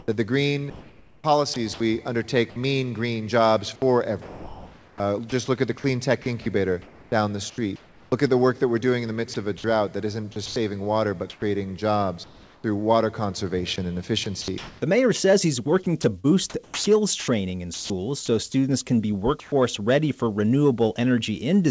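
From 0.70 to 1.80 s and again from 4.22 to 19.52 s, the sound is chopped, likely by the voice detector. About 0.6 s and 3.3 s of signal are replaced by comfort noise, with a smooth noise floor on the spectrogram and abrupt envelope gaps in the waveform.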